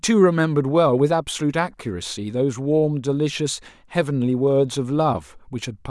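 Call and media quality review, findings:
No faults found in this call and media quality review.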